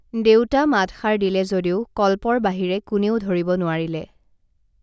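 No technical faults can be heard anywhere in the speech recording; the signal holds steady throughout without any break or disturbance.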